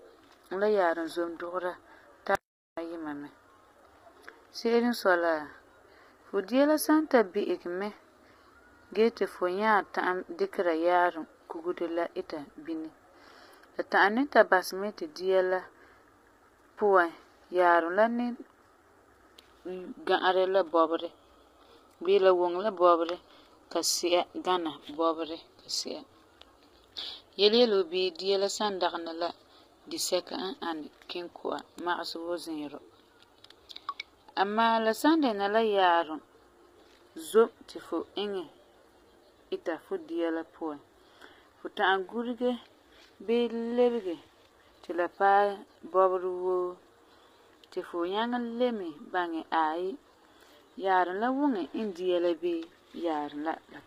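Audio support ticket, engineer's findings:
Speech rough and grainy for the full clip; harmonics smeared, noise filling the gaps between them, top band thin and synthetic. Likely low-delay AAC compression (AAC-ELD), heavily damaged; short frames resolve pitch poorly, and the bit starvation fits roughly 24 kbps. Spectrogram: blurred harmonic stripes, hazy noise floor between them, upper band patchy or uniform rather than detailed.

Audio dropout to silence, 2.35 to 2.77 s, about 0.42 s. Sound cuts mid-flow, then resumes abruptly; no room tone inside the gap. Input likely lost briefly (link or device) while the recorder kept writing silence. Waveform: flat line with hard edges. Spectrogram: a dark vertical band.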